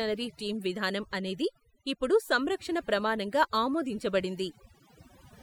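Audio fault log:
Throughout, overdone noise removal. The noise reduction was pushed too hard on noisy speech, so frequency bands near the noise level are cut right down. The background drops and breaks up into twinkling specks. Quiet parts of the speech vanish too.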